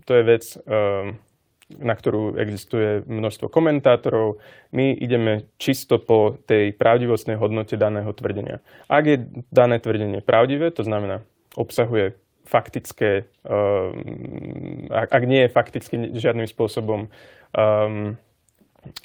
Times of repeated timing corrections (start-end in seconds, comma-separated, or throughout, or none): 0.74-18.43